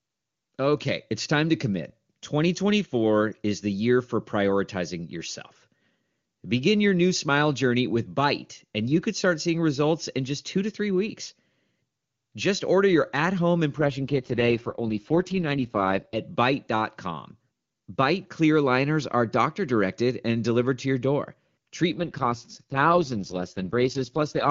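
At 13.77 s the speech turns rough and synthetic. This AMR rate drop lasts until 16.16 s. It recurs from 21.93 to 24.49 s. The band and continuity hold, with no gap. The roughness fits the AMR-WB codec falling from 23.85 to 6.6 kbit/s on a weak link.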